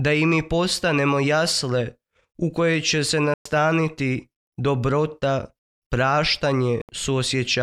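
At 3.34 s the sound cuts out and stays silent for about 116 ms, until 3.46 s. A second gap follows at 6.82 s, lasting about 73 ms, to 6.89 s. Both holes are likely a Bluetooth dropout. Packets failed to reach the headphones in time and were discarded. The first loss fits eight packets, the second five. When the sound returns, it has moved on. The missing stretch is skipped, not paused.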